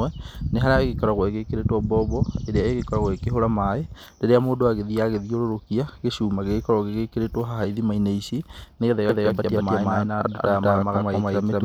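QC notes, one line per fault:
9.09 s to end, doubled audio track: a dry, equally loud copy cuts in roughly 200 ms late, likely from a second, slower capture path.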